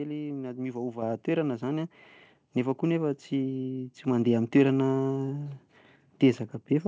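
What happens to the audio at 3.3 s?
Nothing goes wrong at 3.3 s: the speech passes through intact, carrying only the ordinary band-limited sound of a G.722 call path with nothing above 8 kHz.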